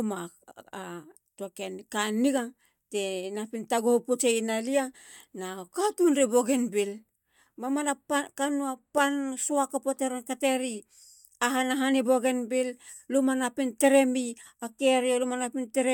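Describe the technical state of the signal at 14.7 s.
At 14.7 s the speech signal is intact, with no audible fault at that moment.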